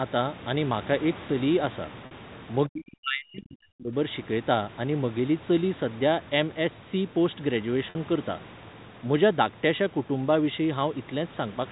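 A telephone-coded speech recording shows two kinds of fault. Packet loss with pitch repetition occurs at 2.06 s and again at 7.9 s, each gap lasting 50 ms. The last pitch period is looped to fill the hole, so the speech holds on a brief buzzy note instead of dropping to silence, which sets it apart from a plain dropout. Between 2.68 and 3.95 s the speech sinks by as much as about 40 dB over roughly a second and a half. That pattern is likely speech suppression during double talk, where the echo canceller pulls down the near talker while the far side is also speaking. Unlike packet loss, this is a sustained gain dip lasting more than a second, not a short, abrupt hole.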